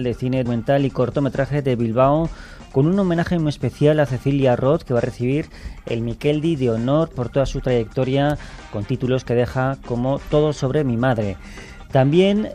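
Damaged data in a compressed stream made the decoder misread frames and lose sync, producing a brief glitch at 0.45 s and again from 10.24 to 10.28 s.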